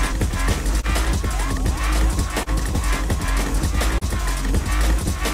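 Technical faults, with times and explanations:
Throughout, doubled audio track: A second full-band copy of the audio sits roughly one second behind the first and about 5 dB quieter, likely captured again by a slower path. It carries no decay or room colour, so it sounds like a distinct, flat repeat.
Throughout, clock drift between sender and receiver: The sender's clock runs about 2 percent slower than the receiver's, so the jitter buffer keeps draining. The receiver repeats short pieces to keep up, producing small timing hiccups at uneven intervals across the clip.
0.80 to 0.86 s, 2.43 to 2.49 s, 3.98 to 4.04 s, short stall from a late packet: Each time a packet arrived late, the jitter buffer ran empty and the receiver stretched the last sound by about 30 ms. Nothing is lost, but the sound hangs briefly with a slight buzz or dip.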